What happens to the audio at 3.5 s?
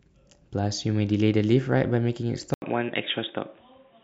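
From 2.54 s, after an 80 ms gap, sound turns dull above 3.8 kHz with fresh background noise: likely input switched to a poorer device.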